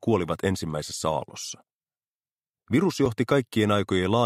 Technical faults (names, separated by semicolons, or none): block of digital silence